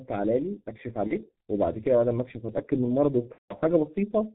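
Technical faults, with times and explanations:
Throughout: G.723.1 codec. The whole recording is squeezed through this low-rate telephony coder, consistent with its 6.3 kbit/s mode. Nothing survives above 4 kHz, and the slowly updated 30 ms voice model leaves speech heavily muffled and hoarse, with smeared consonants.
1.07–1.15 s and 3.32–3.55 s: VoIP packet loss concealed by the speech codec. The decoder fills missing audio by extending its last pitch and spectral shape while fading the level. The first gap fits a single 30 ms frame. The second spans roughly six frames, so the concealment fades and is muted from the third lost frame onward. Speech stays weak or distorted just afterwards while the codec rebuilds its state.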